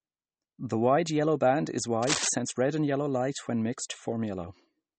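Right from the start, the whole speech clip has that watery, swirly quality of MP3 compression, and it's plainly audible. Nothing comes through above 8.4 kHz, so the top end is simply gone. It's likely an encode where bits ran short, which fits a bitrate around 32 kbps. The encoder dropped the weaker frequency lines, and they flicker in and out from frame to frame, which gives that churning texture.

Then, between 2.02 and 2.29 s, just after "wide yellow band is" and before "red and green light", there's a burst of cable scratch noise, a rustly, scratchy patch sitting on top of the speech at about the same level as the speech itself. The likely cause is a worn cable, connector or control carrying DC getting moved, with its contact resistance jumping around rapidly and throwing uneven bursts of noise into the signal.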